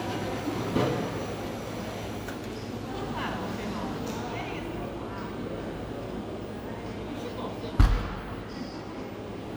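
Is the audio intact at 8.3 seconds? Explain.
Yes, at 8.3 seconds the sound plays through intact, with no dropout, click, distortion or other fault at that moment.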